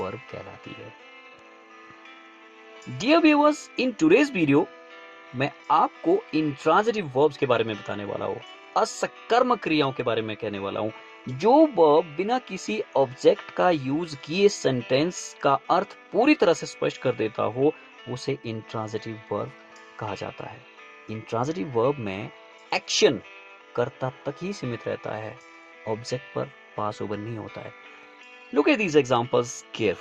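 No technical fault is audible anywhere in the audio.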